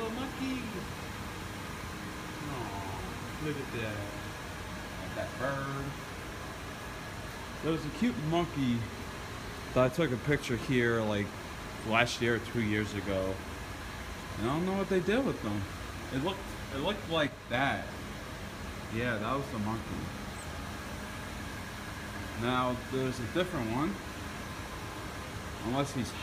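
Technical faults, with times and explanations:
17.28 to 17.54 s: sudden gain jump. The level drops by about 4 dB in a single step, stays down for about a quarter of a second, then returns. The background noise falls and recovers along with the foreground sound, so the whole signal was scaled at once. The change happens from one sample to the next rather than over a ramp, so both edges are abrupt. The likely cause is a digital gain setting applied without smoothing.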